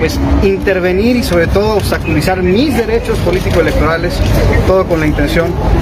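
Gain pumping runs through the whole recording, with the level swinging by around 10 dB. Loud and quiet passages sit unnaturally close together, giving a squashed, breathing texture. The likely cause is input gain set far too high for the microphone, with a fast limiter or compressor repeatedly clamping down on peaks and releasing between them.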